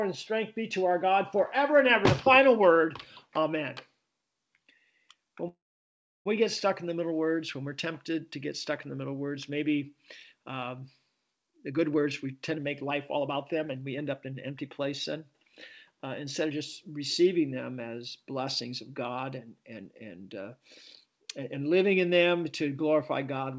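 A call audio freeze at 5.48 s holds the sound still for about 0.8 s until 6.27 s: the last sound is carried on briefly as a fading buzz or hiss, then about 0.69 s of silence follows, and the audio resumes where it stopped with nothing lost, only a delay added. The likely cause is packets held up in transit, so the jitter buffer ran dry and the receiver filled the wait. Jitter buffer speed-up follows from 11.47 to 15.22 s, where the audio runs about 19% fast at unchanged pitch, with around 0.7 s trimmed away. A milder pass from 15.92 to 16.51 s runs about 7% fast and removes only a few hundredths of a second. The receiver had built up more buffered audio than it wanted, probably from the delayed packets arriving together. It worked the backlog down by cutting many short pitch-period slices, which makes the sound feel hurried. Nothing is heard above 8 kHz, which fits the G.722 wideband codec of the call path.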